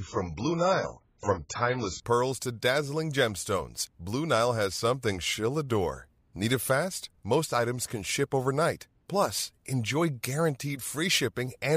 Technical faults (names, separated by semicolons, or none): adaptive stream starting at a low bitrate